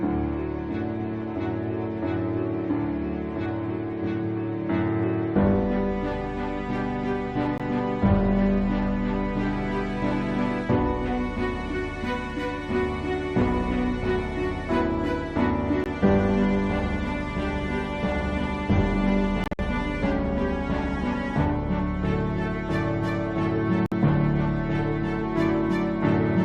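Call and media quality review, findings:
Silent gaps at 7.58 s (19 ms), 15.84–15.86 s, 23.86–23.92 s (56 ms), and broken holes across 19.44–19.59 s. Likely Bluetooth dropout: late packets discarded, playback resumes on time. Waveform shows flat notches; spectrogram shows blank full-band vertical stripes.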